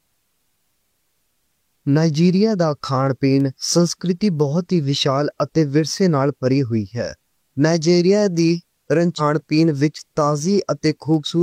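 Word clock ticks run through the speech from 0.42 s to 11.14 s, about once a second, roughly ten in all. The digital link is being read by a device running on its own clock rather than locked to the sender's. The two clocks disagree by something like 20 parts per million, so every time they drift a full sample apart, one sample is dropped or repeated. Each slip lands as a short, sharp tick of uneven strength.

Damaged data in a compressed stream appears from 9.15 s to 9.21 s, a blip lasting about 56 ms while the ticks continue. Part of the encoded stream at that point was corrupted, so the decoder misread the affected frames, lost its place, and had to hunt for the next valid frame header before playing normally again. The result is a brief disturbance where the damaged frames should have been.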